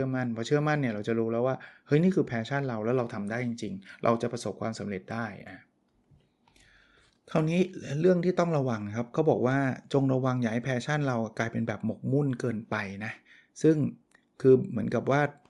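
From start to finish the speech has a breathy, grainy edge up top, and it's plainly audible. That's most likely Bluetooth LC3 compression. The codec chops the signal into very short transform frames, and here the texture fits 7.5 ms frames at around 48 kbps. The high end of the speech sounds breathy and grainy rather than crisp.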